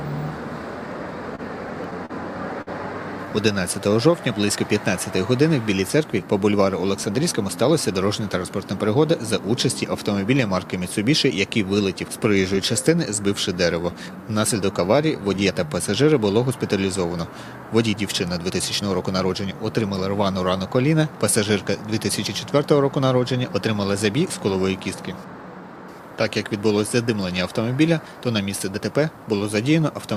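The audio suffers from late-packet playout problems within its first twenty seconds. From 1.35 to 2.11 s there is repeated stalling, a stutter: the jitter buffer ran dry four times as packets arrived late, and the receiver held the last sound each time, filling about 81 ms in all with the longest hold around 38 ms. Nothing is lost, but the passage drags and catches. On a spectrogram, short stretches of frozen, smeared harmonics interrupt the normal texture. At 2.61 to 2.69 s a single late packet causes a short stall. The last sound is stretched for about 54 ms before playback resumes where it left off, leaving playout roughly 54 ms further behind. It is heard as one held sound with a faint buzz or dip, and it shows as a brief flat band in the spectrogram and a repeated, slightly sagging cycle in the waveform. Jitter buffer slow-down occurs at 3.25 to 4.47 s and again at 13.82 to 16.04 s. 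Running low on audio or having just raised its target delay, the receiver repeated single pitch periods or pieces of pauses to rebuild its reserve, adding about 93 ms and 153 ms. The audio plays at 93% speed with unchanged pitch, so sounds are drawn out. In the waveform, runs of near-identical cycles appear, and spectrogram features look horizontally elongated. Jitter buffer speed-up follows at 6.62 to 7.63 s and 17.93 to 19.83 s. With excess audio queued, the receiver cut out short pitch-period pieces, removing roughly 70 ms and 150 ms, so playback runs at 107% speed with the same pitch and sounds hurried. Events appear slightly compressed in time, with small seams in the waveform where cycles were dropped.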